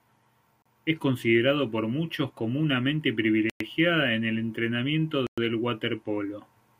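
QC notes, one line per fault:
0.62–0.66 s, 3.50–3.60 s and 5.27–5.38 s: Bluetooth stall. Speech cuts to silence for 34, 107 and 109 ms, then resumes. Likely a drained wireless buffer awaiting resent packets.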